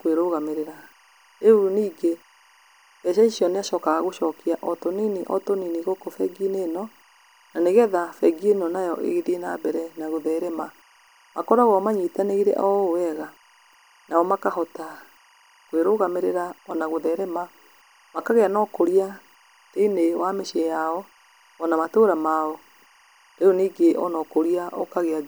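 It's a speech recording with timecode bleed running under the whole thing: a thin, steady chirping warble sitting roughly 35 dB below the voice, flipping between pitches around 1 kHz and 2 kHz. That's linear timecode leaking in from a neighbouring track or cable, its square-wave code switching frequency as the bits change, and the rhythm of the chatter fits 24-frames-per-second code. It never lets up, so it's most obvious in the pauses.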